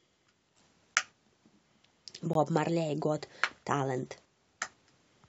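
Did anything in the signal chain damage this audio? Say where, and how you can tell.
Yes. At the playback stage, a gap between stream segments is audible at 2.33 s as a brief hole of about 18 ms in the speech, with hard edges on both sides. The timestamps of two consecutive segments, each 6 s long, don't quite meet, so the player fills the gap with silence. Nothing is lost; the audio after it just arrives about 18 ms late. On a waveform it shows as a flat silent run with abrupt edges, and on a spectrogram as a thin, clean vertical blank stripe.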